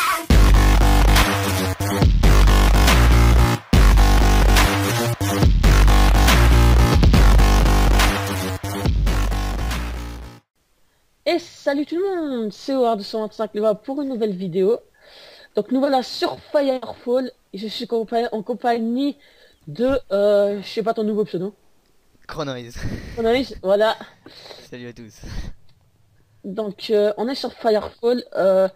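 No technical faults are audible anywhere in this recording.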